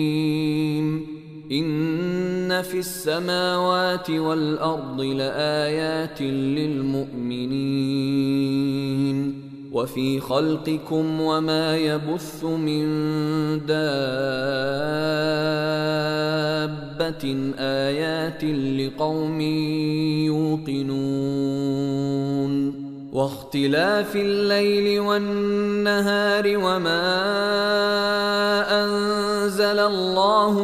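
No technical faults can be heard anywhere in the recording. Nothing in the sound stands out as going wrong at any point.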